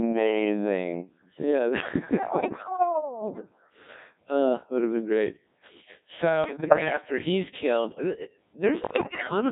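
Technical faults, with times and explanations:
Throughout, gain pumping: the gain swings around 10 dB, ducking under loud speech, likely from gain set far too high with a fast limiter clamping down.
Throughout, Codec 2 vocoder: the speech is heavily robotic and buzzy, rebuilt from sine waves rather than the real waveform, which fits Codec 2 running at about 1.6 kbit/s.
2.40–2.67 s, 6.44–7.01 s (just before "he's killed uh uh") and 8.84–9.31 s (just after it), bit errors on digital voice radio: corrupted frames make pitch, level and tone jump into bleeps and warbly gibberish, worst in the last burst.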